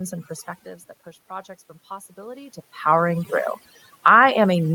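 Throughout the speech, overdone noise removal mutes bands near the noise floor, leaving near-silence with twinkling specks; spectrograms show speckled holes between harmonics.

From 0.63 to 3.36 s, after the talker moves back and the level falls about 16 dB, automatic gain rising lifts voice and background together by about 6 dB, seen as a slowly widening waveform envelope.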